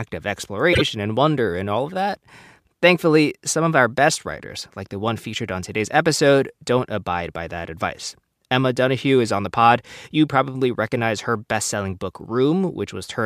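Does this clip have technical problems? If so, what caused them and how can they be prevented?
Yes. Frames out of order appear from 0.73 to 0.82 s, just before "and wonder and all." Two neighbouring frames arrived in swapped order and were decoded that way. That exchanges the halves of this short span. It sounds like a brief garbled flutter. Each swapped piece lasts about 26 ms, which fits single codec frames being exchanged. No time is lost. Reordering packets by sequence number in the receive buffer before decoding prevents this.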